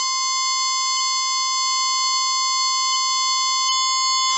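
A music clip with heavy HE-AAC compression throughout: nothing survives above 8 kHz, and the treble below that sounds gritty and metallic rather than simply dull, which points to a very low bitrate near 8 kbps and likely to spectral band replication.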